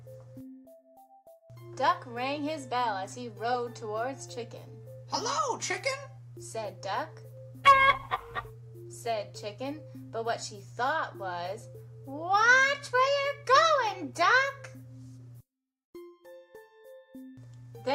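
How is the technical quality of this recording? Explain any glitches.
The technical quality of the recording is sound, with no glitches to explain.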